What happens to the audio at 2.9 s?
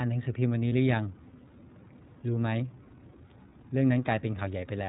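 From 2.87 to 2.92 s a lost iLBC frame, which fits a single 30 ms frame, is concealed by repeating the last pitch cycle with noise. It sounds like a brief buzzy held vowel rather than a silent dropout, and it recovers almost instantly. Underneath runs the iLBC codec, with narrowband audio cut off at 4 kHz and a plainly rough, synthetic texture rather than the smearing of a wideband codec.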